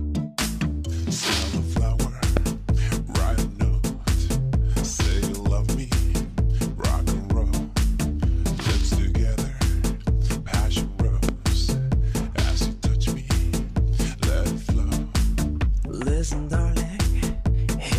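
A sudden voltage step, likely from a plug, switch or static discharge, enters the signal twice, producing a loud pop from 2.37 to 2.39 s and again from 11.29 to 11.31 s. Each is a single sharp pop peaking about 15 dB above the sound, which continues underneath.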